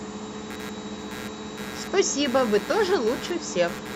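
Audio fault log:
0.5–3.95 s, computer activity noise: a buzzing chirp pulsing at around 150 times per second, roughly 15 dB below the speech, runs to the end. Processor or graphics load shifts the shared audio ground, so the noise follows the computer's activity, not the speech.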